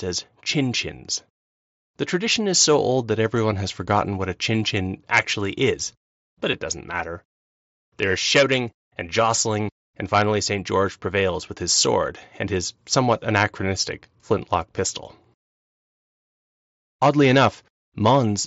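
At 6.52 s, between "chin actually is but" and "doesn't matter", there is a brief concealed Bluetooth headset packet loss. About 7.5 ms of audio failed to arrive from the headset, which fits a single lost packet, and the receiver filled the gap by repeating a closely matching stretch of the preceding waveform. With only one packet missing, the patch is nearly inaudible in the speech carried over the mSBC wideband headset link.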